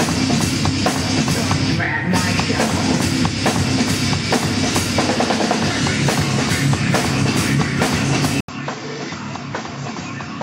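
Input switched to a poorer device at 8.41 s, lasting to the end: after an 80 ms silence, the sound returns roughly 10 dB quieter and duller, with nothing above 7.6 kHz and a faint new background hiss, likely from recording moving to a narrower-band microphone.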